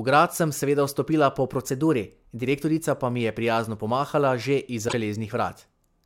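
It's a short speech clip with two glitches. Right after "sem seveda vstopila po", from 1.70 to 2.44 s, the audio runs about 6% fast and sits roughly a semitone sharp, then snaps back before "direktorica pa mi je". That's likely a drift correction step, where clock-matching software briefly changed the playback rate to rebalance its buffer. Then at 4.85 to 4.94 s there's a brief glitch, the mark of damaged data in a compressed stream: the decoder hit corrupted frames and lost sync until it found a clean frame header.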